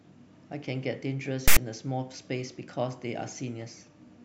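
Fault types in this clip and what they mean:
File tags played as audio: a harsh, loud rasp with abrupt edges cuts into the speech from 1.48 to 1.57 s, lopsided rather than centred. A block of text tag data is being decoded as though it were audio samples.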